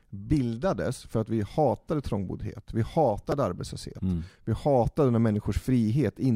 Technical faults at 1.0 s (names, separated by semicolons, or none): none